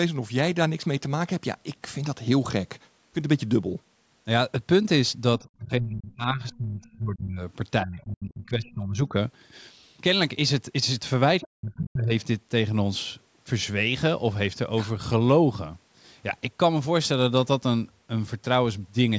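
From 5.39 to 7.42 s the speech sinks in and out, dropping by about 30 dB at its deepest for roughly two seconds. That's speech suppressed in double talk, likely the echo canceller getting confused while both ends talk at once and clamping down on everything. Inside that stretch, at 6.51 to 6.58 s and 6.84 to 6.88 s, there are faint scraps of a second voice, about 30 and 35 dB under the speech. That's the other side's voice leaking through, likely loudspeaker echo the canceller didn't fully scrub from the mic. The same pattern comes back from 7.83 to 9.14 s, with a dip of about 25 dB over about a second and another tiny leak at 8.64 to 8.69 s, around 35 dB down. Then at 11.4 to 11.46 s a louder leak turns up, only about 20 dB below the speech, and right on its heels the hardest cut of the clip, from 11.44 to 12.12 s, where the speech drops by up to about 40 dB. The call's mic processing band-limits everything to 8 kHz, so there's no top end above that to begin with.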